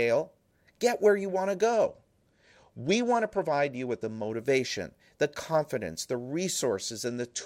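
Right after "where you want to", at 1.73 s, the speech goes dull and gritty until 4.31 s, and the same thing comes back at 7.07 s and runs to the end. That's a Bluetooth SBC bit pool drop: the link got congested and the encoder cut its bit budget, which fits a bit pool falling from 28 to 12, around 96 kbps. The top sub-bands get starved and the rest are coarsely quantised, so the treble fades and grainy noise rides on everything.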